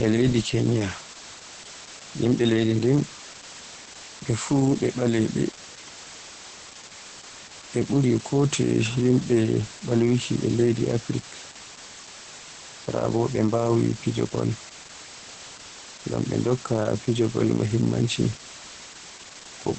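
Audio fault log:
throughout: low bit depth with dither. The speech is carried on what sounds like only 5 bits, with dither added before rounding. That turns the rounding error into a steady, even hiss instead of gritty distortion. The hiss is loud, sitting about 15 dB below the speech. It does not rise or fall with the voice. It stays constant under every word and in every pause. The result is a grainy wash that never lets up.
throughout: Opus voice compression. The speech has been squeezed hard by Opus in its SILK voice mode, at a rate that fits about 10 kbps. SILK models the voice through linear prediction and codes the excitation coarsely at this rate. That makes the voice sound hoarse, muffled and slightly robotic. The band is wideband, with nothing above roughly 8.6 kHz, so the top air is gone. The hiss is also smeared into a burbling texture.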